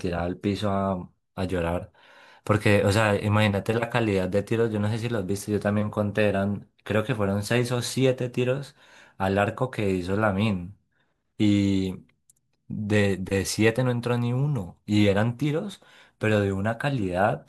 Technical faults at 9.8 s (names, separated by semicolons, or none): overlap between stream segments